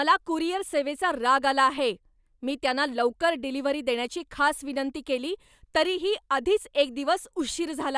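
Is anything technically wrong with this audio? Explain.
No, nothing technically wrong stood out on listening to this speech clip.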